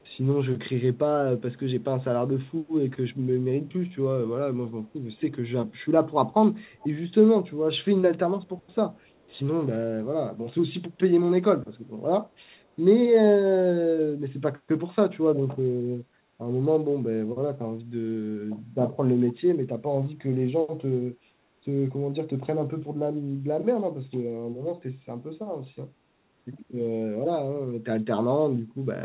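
A faint delayed copy of the speech, trailing the original by 334 ms, surfaces in five short scraps: 0.00 to 0.04 s, 6.61 to 6.88 s, 8.43 to 8.75 s, 8.94 to 9.38 s and 12.57 to 12.68 s. This is likely an echo leak: the far end's loudspeaker output reached its microphone, and the echo canceller let some residue through to be sent back. Most scraps sit about 40 dB below the speech, but the one at 6.61 s is stronger at about 25 dB down. Like everything else on this G.711 path, the repeat has no content above 4 kHz.

From 16.09 to 16.38 s the background is gated by the echo canceller. The canceller, reacting to loudspeaker playback, pulled the microphone gain down, so the room sound dips by up to about 7 dB for roughly a third of a second. The dip is heard as a brief drop in the ambience before it swells back.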